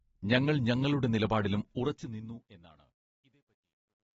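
All the way through, the speech sounds dull and smeared, with nothing above 7.7 kHz and a watery warble on sibilants, which is likely AAC compression at a low bitrate, around 24 kbps.

From 1.68 s, right after "ഞങ്ങളൾ ഞങ്ങളുടെ നിലപാടിലും", the fade-out picks up truncation distortion on a fade, turning gritty and at its worst from 2.84 s to the end. That fits a fade with no dither that keeps only about 12 bits.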